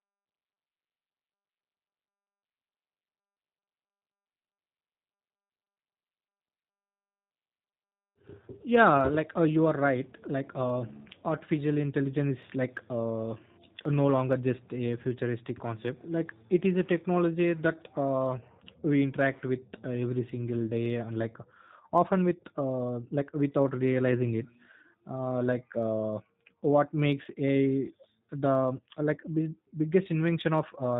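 Speech has been squeezed through a low-rate VoIP coder that rebuilds it from a filter model and sparse pulses, consistent with an 8 kbit/s G.729 codec. Everything above 3.8 kHz is gone, and the voice sounds plainly rough, muffled and slightly synthetic throughout.

From 0.10 s to 30.97 s, a steady stream of clock slip clicks runs underneath, likely from two devices on unsynchronised clocks, dropping or repeating a single sample roughly every 40 ms. That rate points to a mismatch of about 500 parts per million and produces a soft, regular rattling tick.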